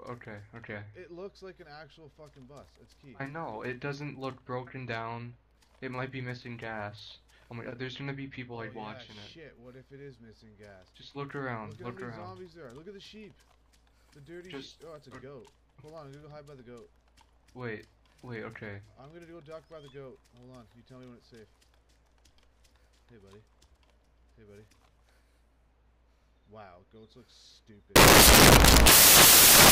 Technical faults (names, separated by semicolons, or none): samples built from the wrong bytes